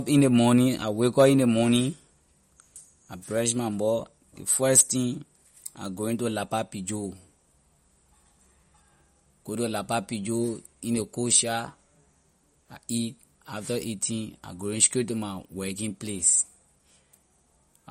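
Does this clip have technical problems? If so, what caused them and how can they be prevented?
Yes. MP3 compression damage runs throughout this speech: nothing above 15.9 kHz, with watery, swirly sibilants, likely from a low bitrate near 48 kbps. Encode at a higher bitrate or keep a lossless master.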